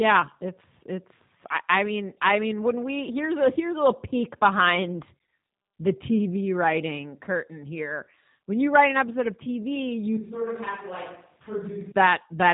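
From start to finish the speech sounds slightly rough and synthetic, with a plainly audible buzzy, processed edge and nothing above about 3.8 kHz, so sibilants are dull and the top end is missing. This is G.729 codec damage, and the sound fits an 8 kbit/s G.729A stream. The codec does not send the waveform. It rebuilds each 10 ms frame from a vocal-tract filter, a pitch predictor and a handful of pulses, and that coarse model produces the grainy texture.

At 10.17 s the voice abruptly turns roomy and hollow, loses body in the low end, and drops by roughly 10 dB. Faint room noise also becomes noticeable, sitting well below the speech. At 11.92 s the sound snaps back just as suddenly. This is a switch to a distant microphone, likely because the close microphone's signal dropped out and a farther source, such as a camera microphone, filled the gap.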